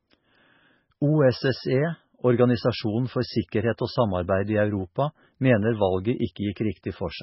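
Throughout the speech, heavy MP3 compression is the likely cause of a watery, swirling sound with metallic chirps on s sounds. A spectrogram shows a hard ceiling at 5.6 kHz and patchy blocks flickering below it, pointing to a bitrate near 16 kbps.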